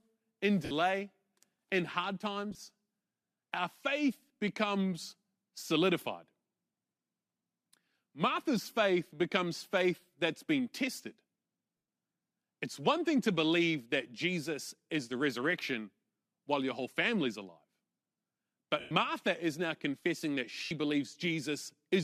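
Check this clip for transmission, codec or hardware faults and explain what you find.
The speech has five short dropouts from lost LE Audio frames. They fall at 0.65 to 0.71 s (60 ms), 11.77 to 11.88 s (110 ms), 18.80 to 18.91 s (110 ms) and 20.64 to 20.72 s (70 ms). At 2.51 to 2.59 s, 40 ms goes missing in short bursts. When frames vanish, the decoder repeats the last spectrum with scrambled phase and lets it fade. Each gap becomes a brief noisy smear. The 110 ms gaps sink toward silence. The concealment style points to 10 ms LC3 frames, likely from a Bluetooth link.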